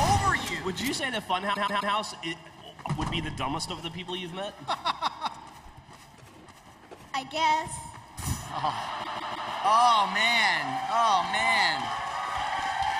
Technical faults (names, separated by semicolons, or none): repeated frames